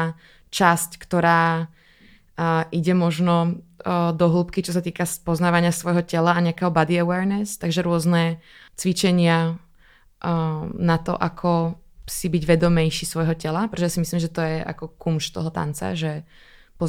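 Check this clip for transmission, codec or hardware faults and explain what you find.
Nothing in the speech points to a transmission, codec or hardware problem; the signal stays continuous and steady in level and tone throughout.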